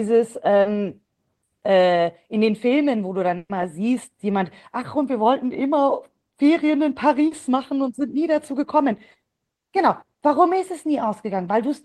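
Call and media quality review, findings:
Short concealed packet loss, 0.61–0.67 s and 7.27–7.33 s: brief smear in the speech. Decoder concealment extrapolated the previous signal over 40 ms of missing audio.

Burst of packet loss, 3.37–3.51 s: 120 ms never played in time. Concealment holds the last sound, fades it to about 40 ms of silence, then resumes further on with that section missing. Spectrogram: a decaying smeared band, then a blank strip. Waveform: tapers to flat.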